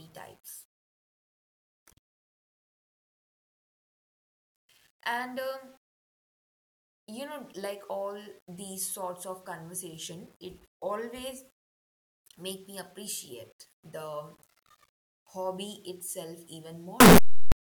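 At 17.00 s the sound suddenly turns into very loud, harsh distortion, and it lasts until 17.52 s. Quiet moments in that half-second blast out as loudly as the rest. This is the signature of signed and unsigned samples mixed up. With 8-bit samples, this likely flips the top bit, so each zero crossing leaps across the full range.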